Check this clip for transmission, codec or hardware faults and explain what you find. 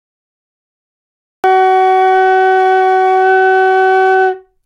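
Yes, there is one fault. From 0 to 1.44 s there is dead digital silence, then the sound bursts in mid-event with no attack: a cut-off start, where capture began late and missed the onset.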